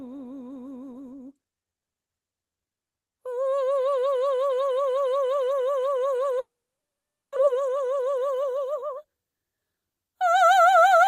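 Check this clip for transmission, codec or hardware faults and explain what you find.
Two faults show up in this music clip, one right after the other.

From 6.39 to 7.38 s there's a long network dropout, likely. The receiver stretches the last sound into a fading buzz, then almost all silence, and about 0.6 s of music is lost.

From 7.47 to 10.71 s there's a jitter buffer speed-up. It trims pitch-period slices to shed roughly 0.3 s of backlog, so the music rushes at about 110% and loses its steady tempo.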